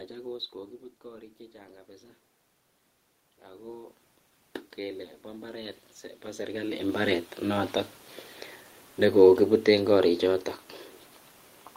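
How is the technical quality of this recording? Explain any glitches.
The recording has two gain faults, both automatic gain rising. From 0.52 to 2.17 s, after the talker moves back around 0.5 s and the input drops by about 10 dB, the gain control slowly adds about 4 dB. From 4.77 to 7.26 s it climbs again, by about 9 dB, overlapping a second talker movement near 6.0 s. Voice and room noise swell together, so the waveform envelope and the spectrogram's noise floor brighten gradually across both stretches.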